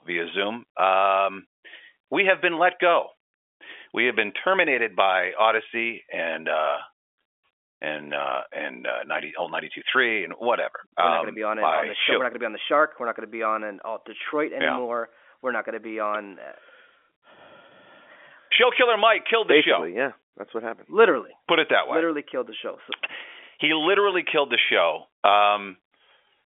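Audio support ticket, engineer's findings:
No faults found; G.711 telephone-band path working as expected.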